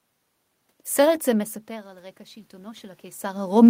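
From 1.26 s to the end, voice and room noise swell together slowly: automatic gain rising, as the gain control lifts its level after the input dropped about 18 dB.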